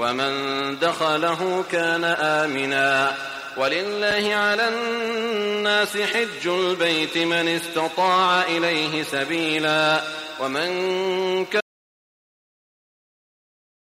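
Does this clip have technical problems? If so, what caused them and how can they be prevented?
Yes. An audio dropout to silence starts at 11.61 s and lasts to the end. The input was likely lost, so only silence remains. Secure connections and monitor input levels while recording.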